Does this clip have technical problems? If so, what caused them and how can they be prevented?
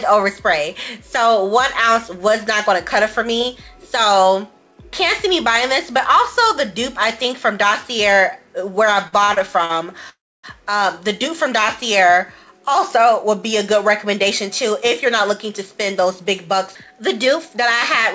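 Yes, three faults are audible, all on a call path whose spectrum stops at 8 kHz, consistent with G.722 at around 64 kbps.

Repeated stalls (stutter) run from 9.08 to 9.71 s. The jitter buffer ran dry four times, and each gap of up to 44 ms was filled by extending the last sound, about 150 ms in total. On the waveform, short stretched segments interrupt the envelope, and on a spectrogram they appear as brief horizontally smeared bands. A larger adaptive jitter buffer and steadier network timing would prevent this.

A call audio freeze lasts from 10.09 to 10.45 s. The sound hangs, fades, then leaves about 280 ms of silence, adding roughly 341 ms of delay before the audio resumes intact. The likely cause is packets held up in transit, which emptied the buffer. The waveform shows a decaying tail followed by a flat gap, and the spectrogram shows a smear fading into a blank column. Prioritising call traffic (QoS) and avoiding congested links would prevent it.

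A jitter buffer speed-up runs from 13.73 s to the end. After the delay built up, the receiver trimmed tiny pitch-period slices repeatedly, so playback runs at 103% speed with the same pitch and around 150 ms removed. On a spectrogram, harmonic spacing stays constant while events sit slightly closer together. Avoiding the preceding delay spikes would make this catch-up unnecessary.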